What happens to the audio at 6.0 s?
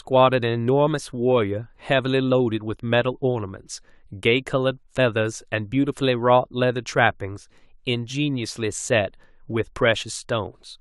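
At 6.0 s the speech carries on intact, with no dropout, click, distortion or other fault at that point.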